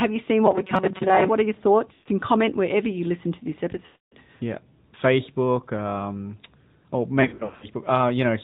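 Across the whole recording of speech the voice sounds boxed-in and buzzy, with no brightness above 4 kHz. That is the AMR narrowband mobile codec, here at 10.2 kbps. It samples at 8 kHz and rebuilds the voice from a vocal-tract model fed by sparse pulses, so the synthetic edge is plainly audible. From 0.46 to 1.28 s, between "you seen" and "are your", the voice turns into a rigid metallic buzz pinned at 188 Hz that only loosely tracks the words. This is robotic sound from repeated short buffers. The likely cause is audio arriving too late, so the player loops a stretch of about 5.3 ms, one over the buzz frequency, and skips most of the real signal. Three times the sound stretches, warbles and sags in level. The first is from 1.94 to 2.08 s, between "are your" and "comment wherever you listen", lasting 120 ms. The second, from 3.86 to 4.15 s, lasts 260 ms and fades further toward silence. 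The third, after "um or" from 7.22 to 7.66 s, is 280 ms of gaps scattered over 400 ms, with no single run longer than 100 ms. These are lost AMR speech frames: corrupted frames are replaced by the decoder repeating its last good pitch and vocal-tract settings at falling gain, and the voice comes back briefly weak and rough.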